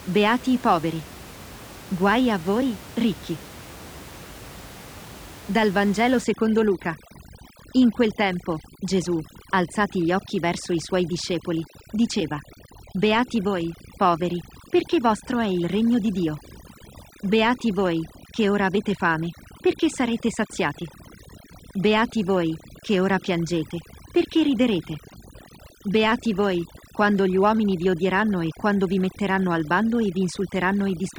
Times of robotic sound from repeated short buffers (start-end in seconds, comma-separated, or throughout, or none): none